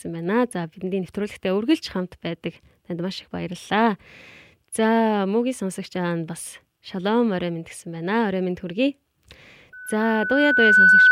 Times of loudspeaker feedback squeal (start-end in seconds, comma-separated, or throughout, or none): 9.72-11.11